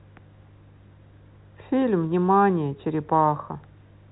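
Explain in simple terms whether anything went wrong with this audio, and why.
Nothing went wrong here.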